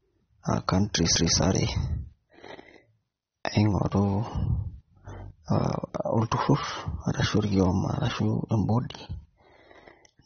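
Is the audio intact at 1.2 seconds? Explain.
No. At 1.16 s a CD skip occurs: the laser jumped to another turn of the disc's spiral, so playback mutes for a few milliseconds and resumes from a different point. The result is a tick followed by an abrupt jump in the sound.

The whole clip, including this moment, carries the marks of AAC compression, likely an AAC-LC encode at a low bitrate of around 27 kbps. The encoder discards everything above about 6.3 kHz and coarsely quantises what remains, so the speech sounds dull and smeared, with a clearly audible warbling, fizzy texture.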